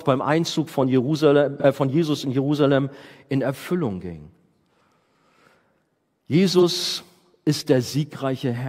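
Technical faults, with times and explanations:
1.60–1.65 s and 6.58–6.62 s, AAC frame loss with concealment: each is a brief smeared, noisy, phasey patch of about 43 ms. Both fit a single lost frame, which the decoder papered over by rebuilding the gap from the last good spectrum.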